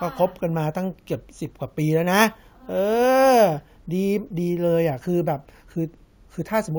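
From start to finish the speech carries a bright, metallic fizz riding above it, swelling and fading with the voice, about 22 dB below the speech itself. This is imaging from sample-and-hold upsampling: each sample was simply repeated to raise the rate, with no smoothing filter, so mirrored copies of the spectrum sit above the original band. The lowest copy spans 8 to 16 kHz, which points to a 16 kHz source raised to 48 kHz.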